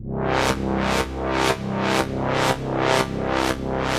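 No technical faults are audible.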